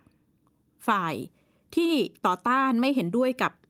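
A short stretch of speech, and nothing in it stands out as a technical problem anywhere along the way.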